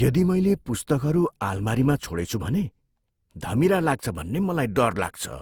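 A speech clip with generation loss throughout. The voice sounds swirly, smeared and hollow, and consonant attacks blur. The likely cause is repeated lossy re-encoding, around five passes, in a way that fits Opus at 64 kbit/s. Nothing remains above 20.2 kHz.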